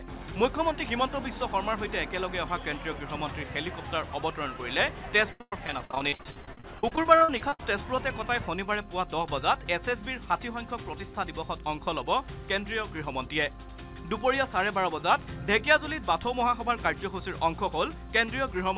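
From 5.32 to 7.60 s, repeated packet loss (robotic sound) sets in: 28 gaps, the longest 110 ms, are patched by stretching the last sound, so about 37% of that stretch is concealed. It sounds choppy. A spectrogram shows smeared, repeated frames, and the waveform shows copied cycles with breaks. The spectrogram is also empty above 4 kHz, which fits a narrowband G.711 call path.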